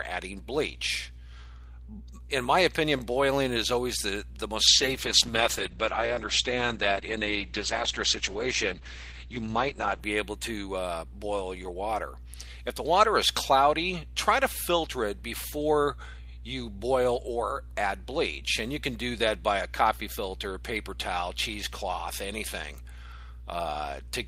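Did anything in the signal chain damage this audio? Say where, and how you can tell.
Yes, a call bitrate drop in the codec stage from 4.68 to 10.07 s. The sound turns coarse and muffled, which fits the encoder falling from about 40 kbps to 10 kbps. On a spectrogram, content above 8 kHz vanishes abruptly (down from 20 kHz) and returns afterwards.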